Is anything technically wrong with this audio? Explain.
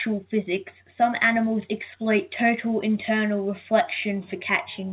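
No, nothing here is technically wrong.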